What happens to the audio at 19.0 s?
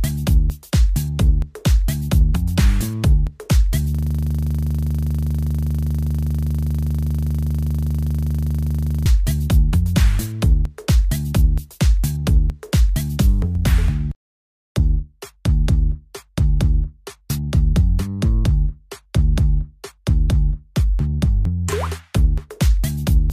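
Nothing goes wrong at 19.0 s; the audio there plays through intact, with no dropout, click, distortion or other fault.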